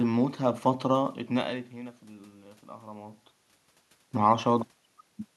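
No technical faults are present.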